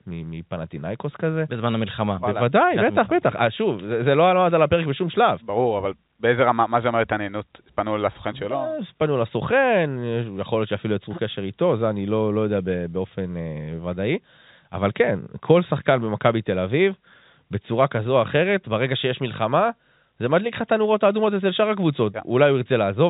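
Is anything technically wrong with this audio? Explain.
No, nothing is technically wrong with this audio.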